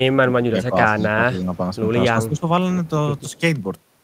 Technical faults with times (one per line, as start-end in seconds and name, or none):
0.00-0.75 speech suppressed in double talk
0.96-1.08 echo leak
1.07-1.51 speech suppressed in double talk
1.36-1.43 echo leak
2.14-2.47 speech suppressed in double talk
3.29-3.40 echo leak